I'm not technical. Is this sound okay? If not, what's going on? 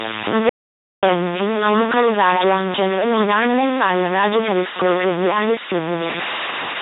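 No. The whole recording has a noisy, distorted edge, and even the pauses hiss. That is most likely a stuck bit, where one digital bit stays permanently on or off.

The voice also sounds robotic and mechanical, with nothing above 3.8 kHz. That comes from the LPC-10 vocoder, an old, heavily compressed format that rebuilds the voice from a few settings instead of the real sound.

From 0.49 to 1.03 seconds, the sound cuts to total silence for about half a second. This is an audio dropout to silence, most likely from a brief lost connection, and whatever was said then is gone.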